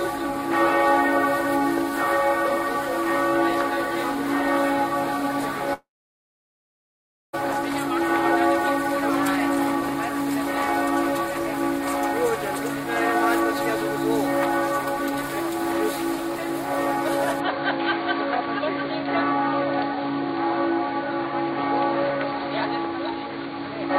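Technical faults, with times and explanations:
5.73–7.35 s, long network dropout: about 1.6 s goes missing. A brief fading tail gives way to roughly 1.5 s of silence, likely from packets never arriving.
17.40 s to end, input switched to a poorer device: no gap and no level jump, but everything above 4.6 kHz vanishes and a new noise floor appears, likely from a narrower-band input.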